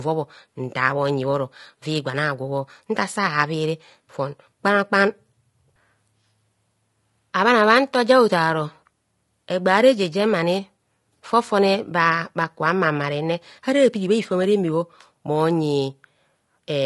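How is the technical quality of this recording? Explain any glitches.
The technical quality is compromised by audible codec damage from start to finish. Throughout the clip, the speech sounds rough and grainy, with noise between the harmonics. This is likely low-delay AAC compression, AAC-ELD at a rate that fits around 32 kbps. Its short frames can't resolve pitch harmonics cleanly and eat up bits, so the voice loses smoothness.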